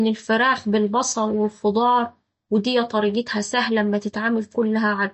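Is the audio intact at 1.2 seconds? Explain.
No, at 1.2 s you're hearing the same damage that runs through the whole clip: everything above 8.1 kHz is gone and the speech has a watery, swirly edge, likely MP3 compression at a low bitrate starved for bits, cutting the treble and flickering weak frequency lines on and off.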